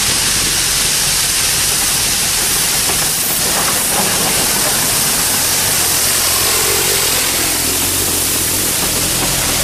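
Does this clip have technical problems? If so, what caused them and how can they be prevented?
Yes. Linear timecode on an adjacent track or cable leaked into the audio, producing timecode bleed: a chirping warble near 1 and 2 kHz, roughly 25 dB down, from 2.28 to 8.57 s, at a rate that fits 23.976 fps code. Keep timecode on separated, shielded cabling and tracks away from programme audio.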